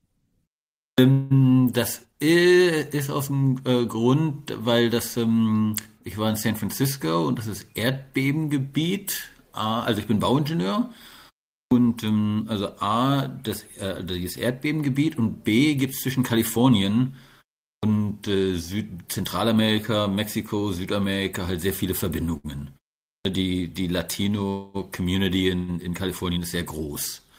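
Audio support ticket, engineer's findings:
Clipped start after a pause, output device sleeping through short silences of about 0.4 to 0.5 s and slow to wake. Onsets at 0.87, 11.61, 17.74 and 23.15 s lose roughly 90 to 110 ms each. Sound begins abruptly, first sounds swallowed.

Call audio freeze, 1.11 to 1.33 s. Likely late packets draining the jitter buffer; receiver filled about 192 ms by extending the last sound as a buzzy, fading continuation. Playback then resumes where it stopped. No audio missing, but a gap inserted and latency up by 192 ms.

Jitter buffer speed-up, 14.51 to 16.85 s at 106% and 25.71 to 26.38 s at 109%. Buffer over target, receiver trimming short pitch-period slices repeatedly, about 0.15 s and 70 ms removed. Sound runs faster at unchanged pitch, audibly hurried, worse in the second stretch.

Short stall from a late packet, 22.37 to 22.58 s. Packet missed its slot and the buffer briefly ran dry. 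Receiver held the current sound for about 70 ms until it arrived, then continued in place. Nothing lost, one sound drawn out with a slight buzz.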